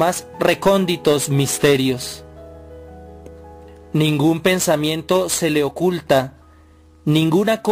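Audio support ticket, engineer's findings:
Sample clock jitter, whole clip: converter clock unstable, timing wander of several microseconds, so samples land early or late at random. Error tracks waveform slope; roughness and hiss roughly 20 dB under the signal, worst on loud, bright passages, gone in silence.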